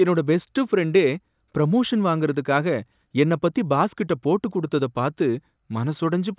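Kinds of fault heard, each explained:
No technical faults can be heard in this speech recording. There is nothing to list under any kind of fault.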